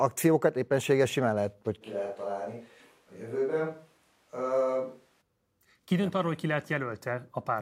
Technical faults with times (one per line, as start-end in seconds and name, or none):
1.83-5.20 switch to a distant microphone